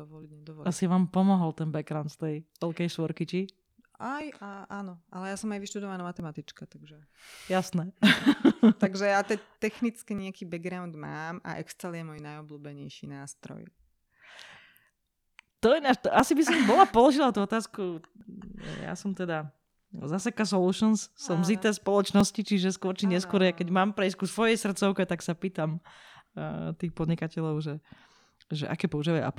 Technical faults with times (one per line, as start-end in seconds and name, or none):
0.22-28.19 periodic USB or driver dropouts